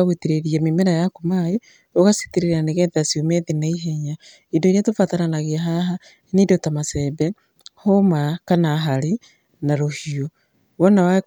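Speech recording with no technical faults heard.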